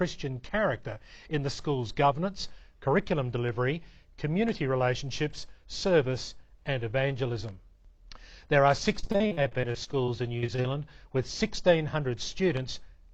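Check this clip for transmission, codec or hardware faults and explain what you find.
One transmission fault is present. From 8.99 to 10.66 s there is repeated packet loss (robotic sound): many short gaps, the longest 41 ms, are patched by extending the previous sound, so about 27% of the stretch is filler. The result is choppy, with pieces missing.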